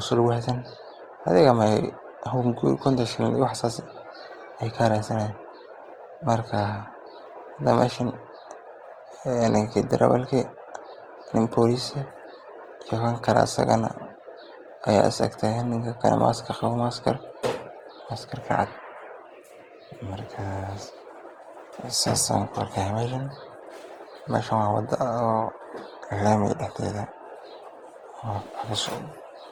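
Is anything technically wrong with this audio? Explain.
Yes. Throughout, the speech sounds grainy and rough, without MP3's swirling holes, which points to Opus compression (likely), its music mode filling bands with noise at roughly 24 kbps.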